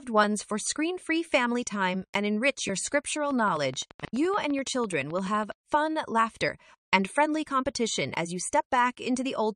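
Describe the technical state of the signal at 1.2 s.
At 1.2 s the signal is intact, with no dropout, clipping, distortion or other fault audible at that moment.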